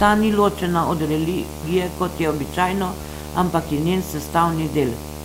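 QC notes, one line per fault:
Throughout: video or display buzz. A steady buzz at 75 Hz sits under the speech, with a fizzy hash riding above it. The rate matches a display refreshing 75 times a second, so the picture signal is leaking into the audio path. A screen or video cable near the audio wiring is the route in. The buzz is strong, roughly 10 dB below the speech, so it stays audible even while someone is talking.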